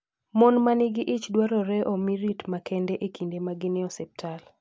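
Nothing in this speech recording trips any alarms, since there's no break, glitch or other technical fault to point to anywhere along the way.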